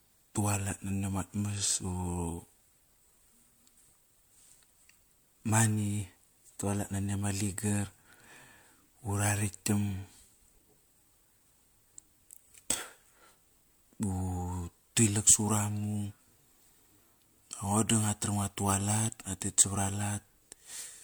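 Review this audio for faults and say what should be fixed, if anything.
Generation loss runs through the whole recording. The speech sounds swirly, hollow and smeared, attacks are blurred, and nothing is present above 20.1 kHz. This points to MP3 near 96 kbit/s, likely re-encoded about four times, each pass requantising on a shifted frame grid so noise and spectral holes accumulate. Keep a lossless master and apply lossy encoding only once, at final delivery.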